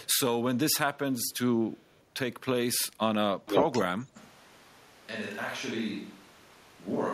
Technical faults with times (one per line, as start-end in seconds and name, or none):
0.01-0.16 echo leak
1.14-1.38 echo leak
1.67-2.02 echo leak
3.46-3.84 echo leak
4.17-7.14 switch to a distant microphone